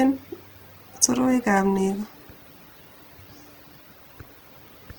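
Opus compression, likely at a rate fitting 16 kbps in CELT mode, runs throughout this speech clip, making it plainly rough, noisy and grainy.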